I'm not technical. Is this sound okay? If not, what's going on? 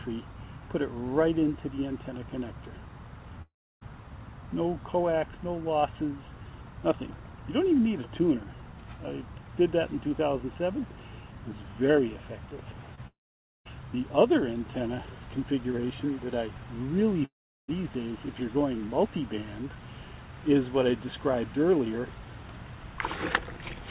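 No. The sound cuts out three times: 3.42 to 3.83 s, 13.07 to 13.67 s, and 17.25 to 17.70 s. Each time, the last sound trails off briefly, then goes silent. That is a long network dropout. The likely cause is the connection stalling. The missing sound never comes back.

There is also a short concealed packet loss from 12.95 to 12.99 s. A tiny piece never arrived. The receiver covered the gap by continuing the sound just before it, so you hear a quick smear or wobble.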